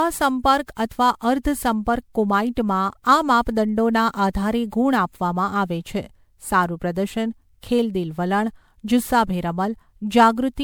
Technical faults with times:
0.00-10.63 generation loss

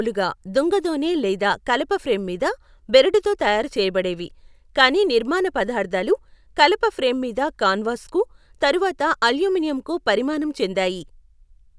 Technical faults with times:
none

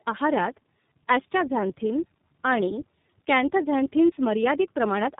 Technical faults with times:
0.00-5.19 tandem speech coding

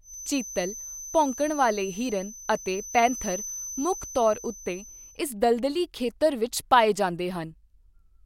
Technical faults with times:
0.00-5.22 feedback whistle

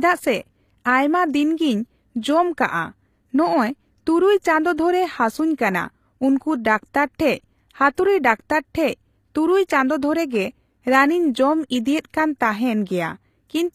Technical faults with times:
0.00-13.75 HE-AAC compression

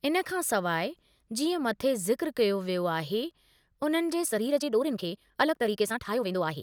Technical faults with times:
4.22-6.63 time-stretched section

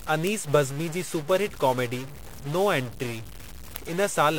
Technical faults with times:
0.00-4.38 stuck bit
0.27-4.34 word clock ticks

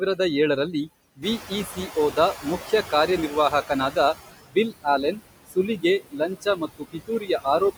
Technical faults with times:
0.00-7.78 overdone noise removal
0.00-7.78 noise suppressor artifacts
1.16-1.51 speech cut by the noise suppressor
1.22-4.14 noise suppressor catching up
4.48-4.86 speech cut by the noise suppressor
5.47-7.61 speech cut by the noise suppressor

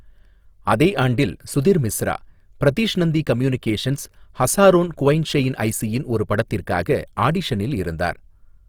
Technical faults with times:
0.00-8.69 Opus compression

